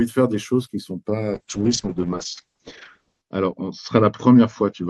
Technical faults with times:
1.35-4.89 call bitrate drop

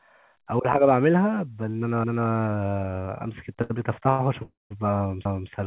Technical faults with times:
2.04-2.29 overlapping chunks
3.62-3.72 short stall from a late packet
4.10-4.21 short stall from a late packet
4.43-4.72 call audio freeze
5.25-5.50 overlapping chunks

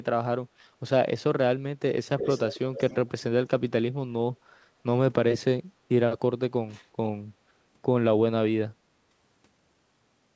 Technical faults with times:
2.19-3.21 echo leak

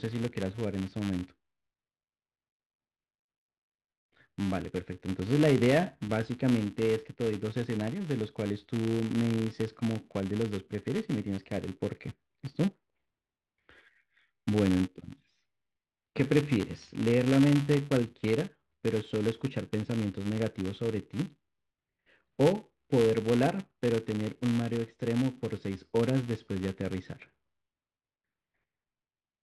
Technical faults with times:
0.00-29.43 filter restarted on every block

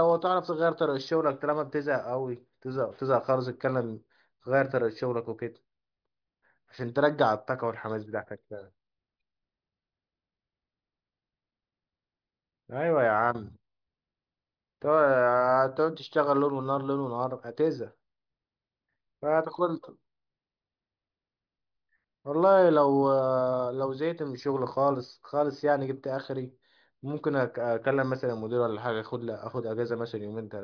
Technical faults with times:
none

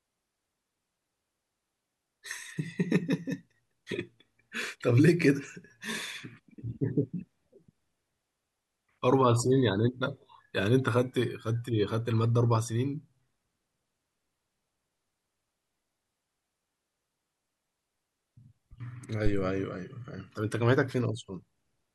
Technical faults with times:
19.26-19.50 phantom power thump

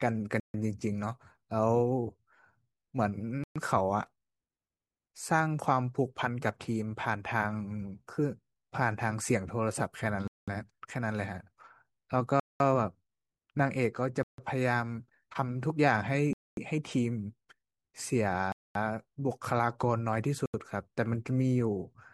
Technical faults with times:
0.40-0.54 Bluetooth stall
3.44-3.56 Bluetooth stall
10.28-10.48 Bluetooth stall
12.40-12.60 Bluetooth stall
14.23-14.38 Bluetooth stall
16.33-16.57 Bluetooth stall
18.52-18.75 Bluetooth stall
20.46-20.54 Bluetooth stall

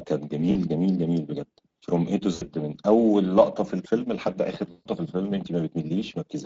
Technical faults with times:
0.00-6.46 Speex codec
0.51-0.57 VoIP packet loss concealed by the speech codec
2.33-2.49 VoIP packet loss concealed by the speech codec
4.71-4.86 VoIP packet loss concealed by the speech codec

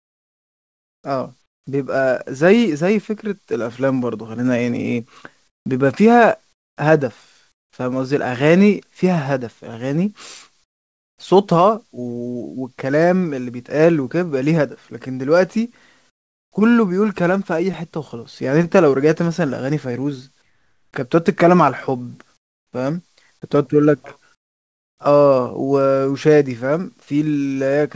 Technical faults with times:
0.00-1.67 comfort noise in place of the background
5.48-5.66 comfort noise in place of the background
6.53-7.73 comfort noise in place of the background
10.64-11.18 comfort noise in place of the background
16.10-16.52 comfort noise in place of the background
20.42-20.93 comfort noise in place of the background
22.37-22.73 comfort noise in place of the background
24.35-24.98 comfort noise in place of the background

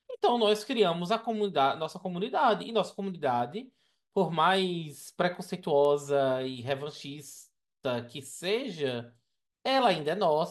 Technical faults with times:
5.85 bit error spike

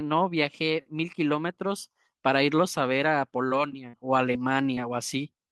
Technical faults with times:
3.89-3.95 short concealed packet loss
4.75-4.79 short concealed packet loss

